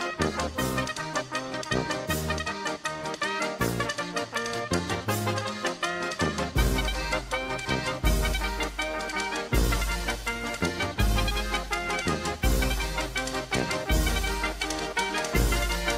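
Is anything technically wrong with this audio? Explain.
Yes. From 0.0 to 2.0 s the adaptive stream starts at a low bitrate: the opening sounds dull and smeared, suggesting a rendition around 24 kbit/s Opus, until the player steps up, plausibly to 64 kbit/s. Unlike a mid-stream bandwidth drop, the change comes only once, at the start, and improves suddenly without any gap.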